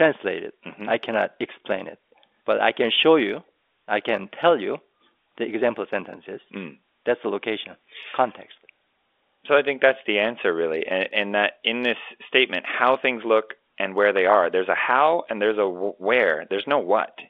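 No technical faults occur at any point in the speech, which comes over the telephone line band of G.711 A-law coding.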